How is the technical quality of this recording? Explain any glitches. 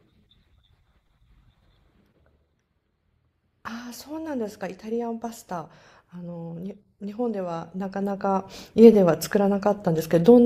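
The recording has one clear glitch: zipper noise during a level change near the end.

From 7.42 to 8.76 s the gain moves by about 10 dB, but it is applied in 2 dB steps, roughly five per second, rather than as a continuous ramp. Each abrupt step puts a small discontinuity into the waveform, so a string of faint ticks rides on the speech while the level shifts, giving a zipping texture instead of a clean fade.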